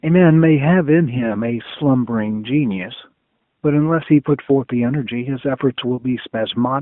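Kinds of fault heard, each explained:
Lost AMR speech frames: A brief dip or warble in the speech at 1.18 to 1.36 s, 4.46 to 4.51 s and 5.96 to 6.05 s, each gone in under a fifth of a second. Each fits a single 20 ms frame that failed its checksum after radio errors. The decoder filled the gap by repeating the last good pitch and vocal tract settings at lowered gain, so the narrowband phone-line sound briefly sags and smears.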